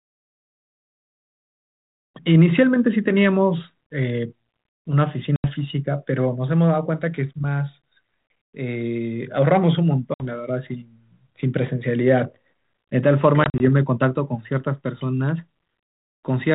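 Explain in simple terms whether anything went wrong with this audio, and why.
Packet loss on an ADPCM call hits the speech at 5.36 to 5.52 s, 10.14 to 10.27 s and 13.44 to 13.66 s. Each time a few chunks of the call went missing and became sudden silence: 80 ms, then 60 ms, then 80 ms spread in short gaps. This phone codec sends only changes from its own guesses, so after each gap the receiving end's guesses no longer match the sender's, and the speech comes back slightly distorted before settling.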